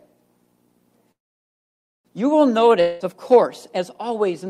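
A call audio freeze runs from 1.11 to 2.07 s: the last sound trails off into near-silence for almost a second, then resumes exactly where it stopped, likely from a jitter buffer running dry. A long network dropout follows at 2.81 to 3.02 s, a fading buzz or hiss bridging about 0.2 s of audio that never returns, likely from lost packets.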